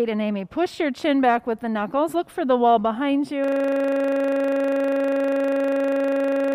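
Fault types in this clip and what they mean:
system hang loop: from 3.44 s onward a 40 ms slice repeats at 25 Hz as a rough buzz, the frozen system replaying one buffer.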